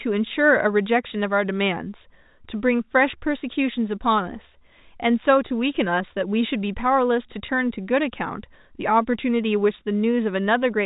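At 5.48 to 5.50 s and again at 7.46 to 7.48 s, the speech briefly holds a buzzy, repeated tone: packet loss with pitch repetition, where the receiver loops the last pitch period to fill a 20 ms gap. Each fits a single lost packet on this G.711 telephone-band line.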